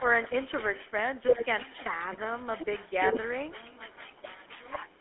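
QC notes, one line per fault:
Throughout, GSM full-rate codec: the speech carries a plainly audible buzzy, gravelly roughness, consistent with a 13 kbps full-rate coder rebuilding the voice from a vocal-tract model driven by a coarse, regularly spaced pulse excitation. The line band runs roughly 200 Hz to 3.5 kHz. On a spectrogram, energy stops sharply near 3.5 kHz and the harmonics look smeared and grainy rather than clean. The room noise sits about 31 dB under the speech.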